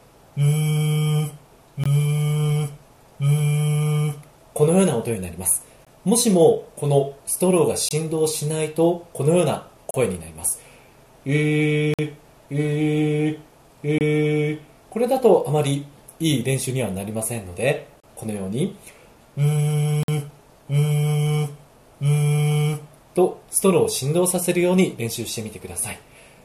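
Gaps between stream segments at 1.84, 5.85, 7.89, 9.91, 11.94, 13.98, 18.00 and 20.03 s, on a 2 s segment grid, insert hard-edged silences of 17 to 50 ms, seen as flat waveform lines and blank vertical spectrogram stripes.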